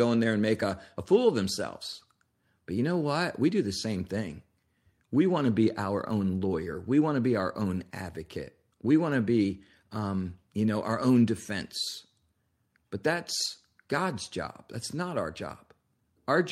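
No technical faults are audible.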